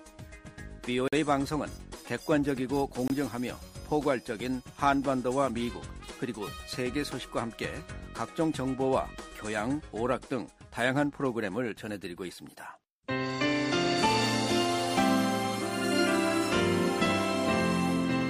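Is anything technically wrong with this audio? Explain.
Yes. There are two blocks of digital silence, at 1.08 to 1.13 s (about 46 ms) and at 3.08 to 3.10 s (about 23 ms). The program likely failed to fill its output buffer in time, consistent with 2048- and 1024-sample blocks, so the audio drops abruptly to silence and back, leaving a brief hole.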